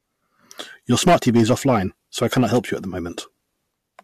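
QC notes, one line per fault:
0.91–1.77 s and 2.23–2.58 s, hard clipping: the speech was driven about 12 dB, then about 5 dB, past what a gain stage could pass, flattening peaks into harsh fuzz just before "you at the".
3.23 s, damaged data in a compressed stream: corrupt bytes right after "you at the" made the decoder misread frames and resync, giving a brief glitch.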